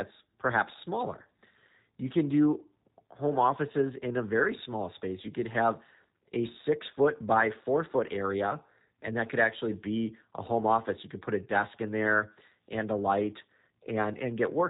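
From start to finish the speech sounds muffled, slightly rough and synthetic, with nothing above 4 kHz. This is plainly audible G.729 codec damage: each 10 ms frame is rebuilt from a vocal tract model and sparse pulses, which fits 8 kbit/s.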